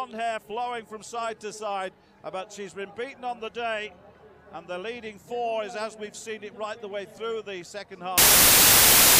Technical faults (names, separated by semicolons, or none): wrong sample width